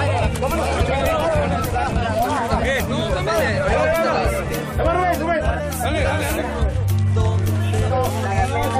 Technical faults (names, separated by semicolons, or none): none